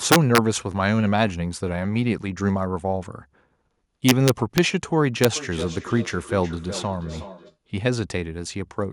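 A speech clip with integer overflow at 0.12 to 0.38 s (peaks about 4 dB over the limit), 4.09 to 4.58 s (about 2 dB over) and 5.24 s (right at the limit). Instead of being capped, the loudest samples wrap to the opposite sign. That produces violent cracks far sharper than the flattened buzz of clipping. From 5.36 to 7.58 s there is a feedback echo between two devices, peaking about 14 dB below the speech. A second device replays this microphone's sound and it is picked up again. This echo canceller cannot remove it, because it only removes sound its own device plays. The echo differs from room reverberation: it comes back as a distinct thin copy roughly every 0.4 s, not a smooth decaying tail.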